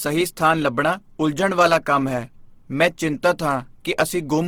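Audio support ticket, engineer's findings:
Speech grainy and rough across the whole clip, 0 to end. Smeared into a noisy texture, not swirly or hollow. Top end still present up to about 20.3 kHz. Likely Opus compression in music (CELT) mode: band energies kept, starved bands filled with folded or noise content. Damage level fits a low bitrate near 16 kbps.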